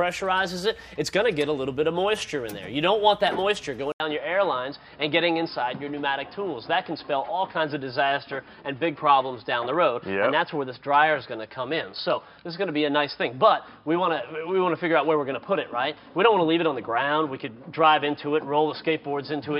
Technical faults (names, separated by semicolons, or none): input switched to a poorer device